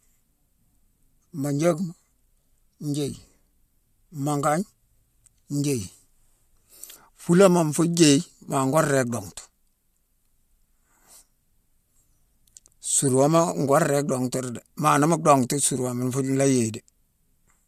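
No technical faults can be heard anywhere in the recording, and the speech signal arrives intact throughout.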